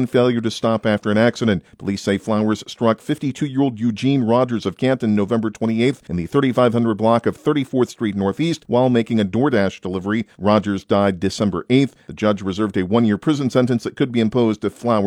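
Nothing stood out on listening that would count as a technical fault.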